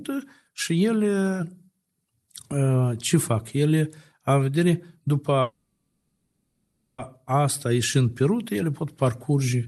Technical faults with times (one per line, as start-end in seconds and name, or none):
5.41-7.01 call audio freeze